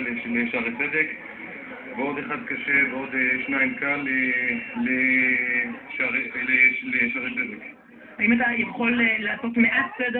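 No technical faults can be heard anywhere in this audio.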